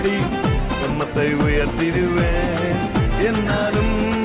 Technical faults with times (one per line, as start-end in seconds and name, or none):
0.90-0.92 skip ahead